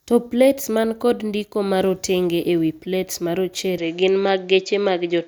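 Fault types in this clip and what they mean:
Input switched to a poorer device: at 3.78 s the speech abruptly loses everything above 7.6 kHz and gains a faint new noise floor, likely from a change to a narrower-band microphone.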